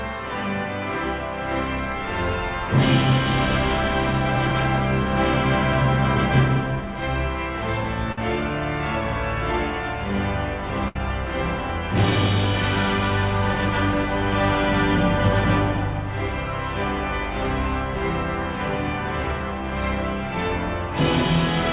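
At 8.12 s the sound briefly smears into a held, fading tone for about 50 ms, then resumes at 8.18 s with a little skipped. The same happens at 10.88 s, lasting about 70 ms to 10.96 s. Each is a burst of packet loss: consecutive packets never arrived in time, so the receiver stretched the last sound and let it decay before playback jumped ahead. The whole clip stops at 4 kHz, which fits a G.711 call path.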